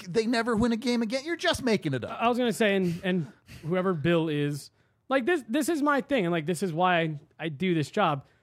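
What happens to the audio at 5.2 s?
At 5.2 s the speech carries clock slip clicks, part of a continuous pattern running from 0.13 s to the end. A single sample is skipped or doubled roughly every 0.05 s, about twenty times per second, which is heard as a faint, fast rattle riding on the sound, strongest on loud sustained passages and absent in pauses. The likely cause is two devices running on unsynchronised clocks that disagree by roughly 400 parts per million.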